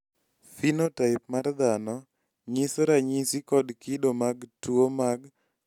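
No technical faults occur anywhere in the audio, so there is nothing to describe in time order.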